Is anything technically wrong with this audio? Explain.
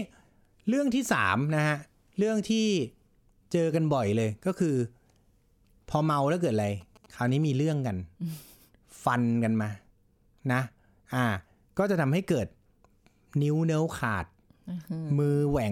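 Yes. From 6.57 to 7.45 s there is GSM signalling burst interference: a nearby 2G phone transmitting short signalling bursts, rectified by the audio circuitry. It sounds like a galloping ticking with brief 217 Hz buzzes, well below the speech level.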